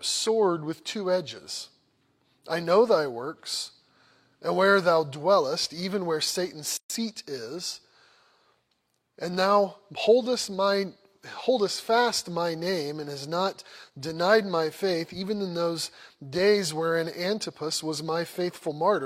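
At 6.77 s the continuous sound drops into a silence of about 128 ms, ending at 6.90 s, then resumes exactly where it left off. This is a gap at a join of encoded pieces: two separately encoded sections were butted together untrimmed, so the encoder's start-up delay and last-frame padding sit between them. On a waveform it shows as a flat stretch with smeared edges; a spectrogram shows a clean full-band blank column, its borders blurred by the codec.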